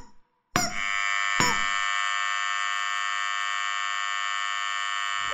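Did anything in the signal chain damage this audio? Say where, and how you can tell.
No, nothing in the signal chain audibly damaged this audio. I can't trace any problem to a particular stage of the chain.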